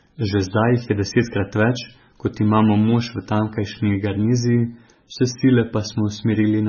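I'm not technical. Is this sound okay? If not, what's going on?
No. From start to finish this speech has heavy damage that sounds like MP3 compression, most likely from being saved at a very low quality setting. The encoder ran short of data, so it threw away everything above about 6.6 kHz, which leaves the sound dull and muffled. It also dropped quieter details that flicker in and out, which gives a watery, swirling texture, especially on s sounds, and softens the starts of sounds.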